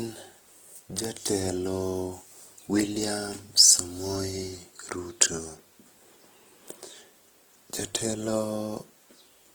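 Throughout the speech, Opus compression is likely at work, at a rate near 16 kbps: tones sound grainy and rough, and the spectrogram shows noise-filled bands reaching to about 20.1 kHz.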